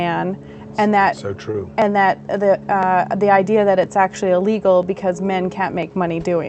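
From 0.78 s to 5.83 s, periodic USB or driver dropouts recur once every 1.0 s, about seven in all. Each time, a background task stalls the audio driver and roughly a millisecond of samples is skipped outright, leaving a small regular tick wherever signal is present.

At 1.51 s, a short stall from a late packet appears: a network packet arrived late, the jitter buffer emptied, and the receiver held the last sound for 28 ms before resuming where it left off. Nothing is lost, but that moment drags briefly, with a faint buzzy smear.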